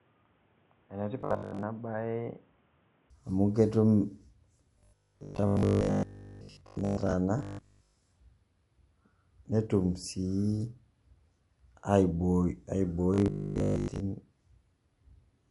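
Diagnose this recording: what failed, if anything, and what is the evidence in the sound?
The opening 3.10 s were most likely captured on a poorer input device. The stage is the capture device or driver. The speech is dull and boxy, with a narrower band, a level about 10 dB lower, and a new noise floor roughly 30 dB under the speech. At 3.10 s, just before "amu ketum", the sound clears and brightens with no gap. On a spectrogram, the energy is cut off at a lower frequency and then extends to full bandwidth. The waveform steps up in amplitude at that point.

Robotic sound from repeated short buffers appears at 1.21–1.63 s, 4.79–7.13 s, 7.39–7.95 s and 13.14–14.0 s. This is a driver or buffer fault. Each stretch becomes a rigid metallic buzz at 50 Hz, which fits a 20 ms buffer being replayed while new input likely arrived too late. Most of the audio is repeated in these stretches, and all of it at 7.39–7.95 s. 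A spectrogram shows evenly spaced 50 Hz harmonic lines. The waveform shows identical 20 ms cycles.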